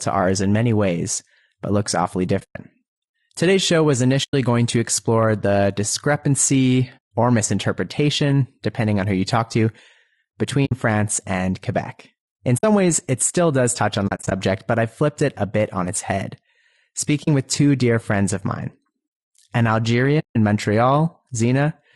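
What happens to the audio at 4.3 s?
AAC frames were lost and the decoder zeroed them, an AAC frame loss with muting. From 4.23 to 4.34 s, between "show was" and "going to explore the", the speech fades into a soft-edged silence of about 100 ms and back, which fits roughly five dropped frames. Around that gap, the speech is plainly rough and grainy, with noise between the harmonics, likely from low-delay AAC compression (AAC-ELD) at a bitrate around 32 kbps.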